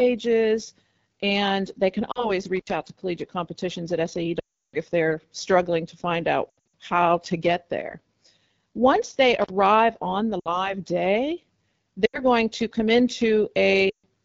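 Throughout, the speech carries AMR wideband (HD Voice) codec damage: a rough, raspy texture that fits the low 8.85 kbit/s mode. The model-driven band below 6.4 kHz loses fine detail, and the spectrogram shows a thin, noise-filled strip above it to 7 kHz.

Lost AMR speech frames occur at 2.12 to 2.31 s, 4.40 to 4.76 s, 6.50 to 6.72 s, 10.40 to 10.75 s (after "on the"), 12.06 to 12.23 s and 13.89 to 14.06 s. Failed frames force the decoder to repeat its last pitch and vocal tract settings at falling gain, so the sound warbles and fades. On the spectrogram these gaps appear as smeared, repeated harmonics that darken quickly. The 340 ms run at 4.40 s drops to near silence, and the scattered losses near 6.5 s flutter.

Intermittent contact hits at 2.57 s, an 81 ms dropout just before "out to collegiate competitions", and at 9.42 s, 59 ms before "on the". The circuit briefly opens. The waveform collapses to faint hiss between sharp crackle spikes at each edge.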